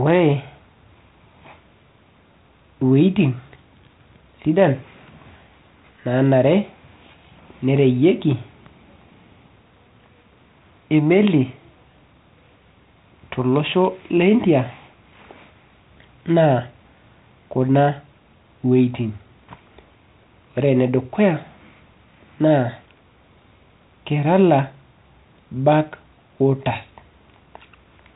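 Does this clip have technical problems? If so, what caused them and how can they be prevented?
No, this clip has no technical problems, so there is nothing to trace to a cause or prevent.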